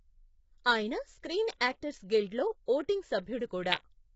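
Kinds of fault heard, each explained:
Low-delay AAC compression: Throughout, the speech sounds heavily rough and grainy, with nothing above 7.7 kHz. This is likely the short-frame AAC-ELD coder used in video calls, running at a low rate that fits about 16 kbps, too few bits to render pitch harmonics cleanly.
Pre-echo: At 1.59 s, just after "ఆయన స్క్రీన్", a hiss of about 15 ms leads into a sharp attack, softening its onset. The coder spread noise, sized for the loud attack, across its whole block, filling the quiet moment beforehand.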